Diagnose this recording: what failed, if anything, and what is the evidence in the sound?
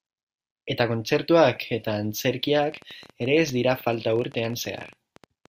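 From 2.64 s to the end at 5.47 s, a train of clicks ticks over the speech at about 14 per second, unevenly spaced, roughly forty in all, each reaching about the level of the speech itself and sounding much alike, audible in the pauses too. Similar pulses arriving at an uneven pace point to something outside the signal injecting them, most likely electrical interference picked up in the analogue wiring from nearby equipment.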